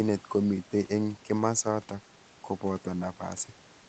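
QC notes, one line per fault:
Nothing to flag on this one; the speech just carries the usual character of a call line, with the top end stopping around 8 kHz, which is normal for that path.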